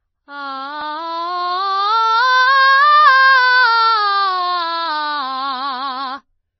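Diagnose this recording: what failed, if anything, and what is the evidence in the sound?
Codec stage, likely MP3 compression: the bit-starved encoder cut the music's treble at 5.9 kHz throughout, fitting 24 kbps; a spectrogram shows a hard ceiling.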